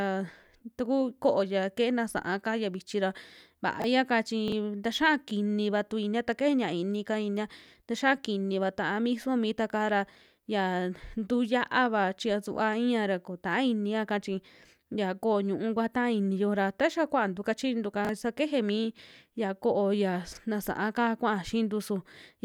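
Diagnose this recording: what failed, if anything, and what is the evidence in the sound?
Chunks out of order at the buffer stage: brief jumbled moments at 3.80, 4.48, 18.05 and 20.33 s, each a 21 ms chunk played one slot late. Unlike dropouts, no sound goes missing.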